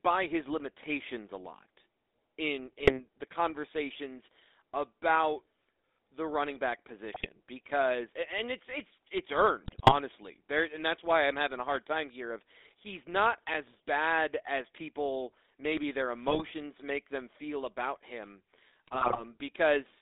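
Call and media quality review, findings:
Buzzy, gravelly roughness on the speech throughout, band confined to roughly 300 Hz to 3.7 kHz. Probable component: GSM full-rate codec, consistent with the 13 kbps full-rate coder. Vocal-tract model driven by sparse, regularly spaced pulse excitation; fine excitation detail discarded, leaving the grainy buzz. Damage plainly audible across the whole clip.

Brief squawks, pops and gargling bursts at 2.78–3.00 s, 7.14–7.26 s, 9.64–9.94 s, 16.28–16.45 s and 18.87–19.24 s. Probable component: GSM bit errors from a weak radio link. Corrupted filter, pitch or gain parameters reaching the decoder, warping the spectrum or spiking the level for 5 to 14 frames each. Longest bursts at 9.64 s and 18.87 s.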